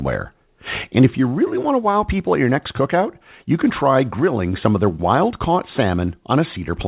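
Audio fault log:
No faults found; the speech passes through a WebRTC call path on G.711 mu-law at 64 kbps, with nothing above 4 kHz.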